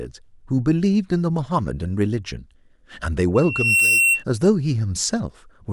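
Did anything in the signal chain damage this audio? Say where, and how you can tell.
Yes. From 3.35 s to 4.24 s a loudspeaker feedback squeal takes over, so the damage lies in the acoustic loop between microphone and loudspeaker, ahead of any digital stage. A single tone at 2.7 kHz swells over roughly 0.4 s until it stands about 5 dB above the speech. That self-building growth sets it apart from steady electrical hum or whine, which sits at a constant level from the outset. Here the loop gain exceeded one at that frequency.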